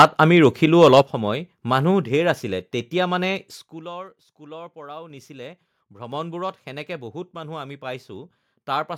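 Speech opens with microphone overload from 0.0 to 0.46 s and again from 0.81 to 1.01 s, peaks flattened with a harsh crackle, likely from input gain set so high that the converter was driven about 9 dB and then about 4 dB past its limit. Early in the first and right after the second, a microphone volume step down cuts the level abruptly, by 3 dB at 0.02 s and 6 dB at 1.02 s. Microphone volume steps up follow at 5.1 s (+4 dB) and 6.12 s (+5 dB), voice and background jumping together as the call software raised the input gain.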